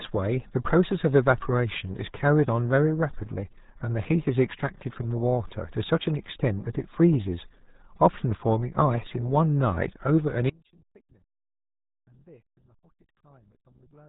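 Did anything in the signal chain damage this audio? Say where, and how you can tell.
Yes, two problems. The whole recording went through the RealAudio 14.4 codec at 8 kbit/s. Nothing gets past about 3.8 kHz, so the speech sounds muffled and gargly. The codec is squeezing the signal into a dial-up-sized bitstream and throwing away most of the detail.

Then at 10.50 s there's an audio dropout to a faint residue that lasts to the end. The signal cuts off abruptly and leaves only a faint sound roughly 30 dB down. The likely cause is a break upstream while the downstream path stayed live.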